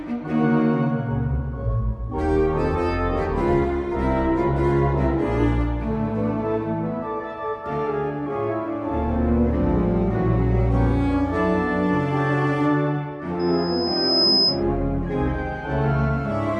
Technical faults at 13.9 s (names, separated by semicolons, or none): loudspeaker feedback squeal